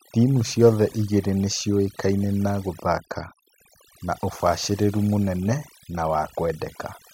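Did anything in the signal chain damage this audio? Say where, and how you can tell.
Yes. Throughout the speech the gaps between phrases drop to near silence dotted with twinkling specks, and the quieter detail of the voice is hollowed out. That is overdone noise removal: a suppressor set too aggressively pulls individual frequency bands down or out whenever they sit close to its noise estimate, so low-level parts of the voice are discarded along with the noise.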